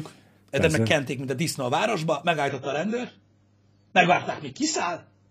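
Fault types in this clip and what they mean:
Adaptive stream at a lower bitrate: The stream switched to a cheaper version of the same speech when the connection slowed. At 2.50 s the quality drops suddenly, with no gap, and stays low to the end. The treble is gone, with nothing above 7.6 kHz. The speech turns duller, and codec artefacts rise. The sound points to a step down from about 96 kbit/s to 16 kbit/s AAC.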